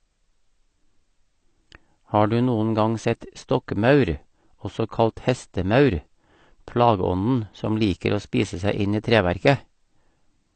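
From start to finish the speech sounds dull and smeared, with nothing above about 8.6 kHz and a fizzy, warbling texture on sustained sounds and sibilants. The damage is plainly audible across the whole clip. The likely cause is AAC compression at a low bitrate, on the order of 32 kbps. Short of bits, the encoder lowered its cut-off and coarsely quantised or dropped bands of the spectrum. That blurs detail and leaves the high end swirling rather than crisp.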